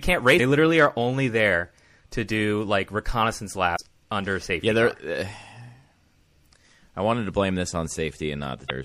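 MP3 compression runs through the whole clip: the speech sounds watery and swirly, with s sounds turned metallic and chirpy. The likely cause is an encoder starved of bits, which fits a low bitrate of about 64 kbps.

Damaged data in a compressed stream breaks through three times, at 0.36–0.40 s just before "literally are only there", at 3.75–3.80 s between "to do like reconnaissance" and "under safety", and at 8.66–8.71 s. Each lasts about 44 to 52 ms and is a short squawk or blip where the decoder misreads bad frames and resyncs on the next header.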